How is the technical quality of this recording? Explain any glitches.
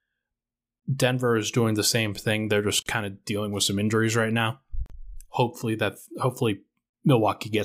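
The recording has gaps at joins of encoded pieces, at 0.80, 2.82 (before "kind of dealing with") and 4.86 s (after "some injuries right now"), repeating every 2 s and lasting 27 to 38 ms. Separately encoded segments were joined untrimmed, so each encoder's leading delay and padded final frame leave a brief dropout. The speech stops and resumes where it left off. A spectrogram shows a thin blank vertical stripe, and the waveform shows a notch.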